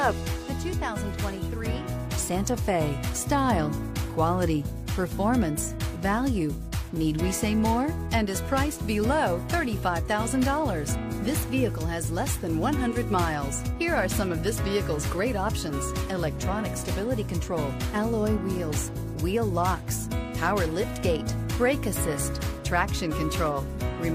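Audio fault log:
No faults heard anywhere in the clip.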